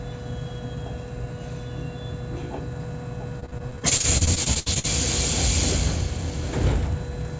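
From 3.40 to 4.86 s the sound breaks up with repeated packet loss (robotic sound): about 18 short holes, the longest around 68 ms, where the receiver stretched the last bit of audio to cover missing data, leaving roughly 29% of that stretch concealed. It sounds choppy. On a waveform the envelope stutters into flat, repeated segments. A spectrogram shows smeared, copied bands interrupted by notches, all sitting below the 8 kHz ceiling of the call path.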